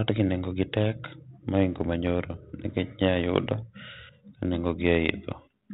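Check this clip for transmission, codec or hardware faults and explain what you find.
No faults found here.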